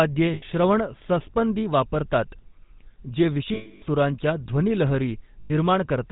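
GSM full-rate codec coding runs through the whole speech clip, plainly audible as a buzzy, gravelly roughness with nothing above 4 kHz. The codec models the vocal tract as a filter and excites it with regularly spaced pulses, keeping only every third excitation sample, so the fine detail of the voice is replaced by a coarse pulse train. The degree of damage fits the 13 kbps full-rate mode. Lost GSM frames occur at 0.34–0.43 s (80 ms), 3.54–3.83 s (280 ms, ending just before "सुरांच्या ध्वनी") and 5.40–5.52 s (100 ms). In each gap the decoder repeats the last good frame's parameters, giving a held, rough metallic ring in place of the missing sound.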